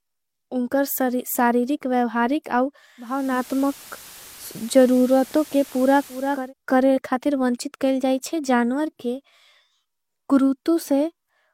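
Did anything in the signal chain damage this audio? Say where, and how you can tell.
Yes, at radio reception: digital radio blending to analogue FM after "वेवहारिक आउ", 2.96–6.54 s. 482 ms cross-fades bracket a stretch that shows on the spectrogram as hiss about 20 dB below the speech.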